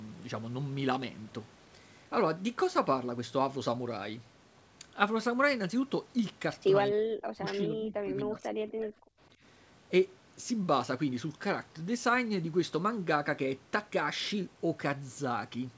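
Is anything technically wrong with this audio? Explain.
Yes. From 6.91 to 8.59 s and again from 8.76 to 8.93 s, the speech drops away, likely speech suppressed in double talk: the echo canceller could not separate the talker from the overlapping loudspeaker echo and attenuated everything, so the voice sinks by up to about 40 dB.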